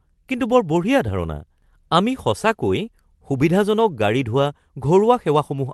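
No faults: the speech comes over a call link whose band tops out near 12 kHz, which fits an Opus call codec, with only that codec's normal coding texture.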